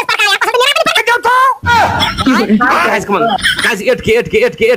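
From 0.0 to 0.97 s the opening section plays at the wrong speed, running 1.64 times faster than it should, which pushes the pitch up by close to ten semitones. The sound comes across high and rushed, then drops to its proper rate and pitch abruptly at 0.97 s. Because speed and pitch shift together, the likely cause is a playback or editing stage reading this stretch against an incorrect clock.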